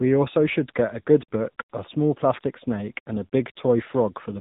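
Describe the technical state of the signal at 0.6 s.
At 0.6 s the speech carries tandem speech coding, present across the whole clip rather than at this moment alone. The signal sounds as if it passed through two speech coders in a row, decoded and re-encoded at each link boundary. The last stage behaves like low-rate AMR-NB working on audio already roughened by the earlier coder. Nothing is heard above 3.8 kHz, so the speech sounds muffled. It also sounds grainy and warbly.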